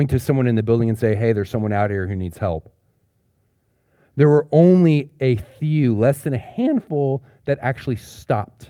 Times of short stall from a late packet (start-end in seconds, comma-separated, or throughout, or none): none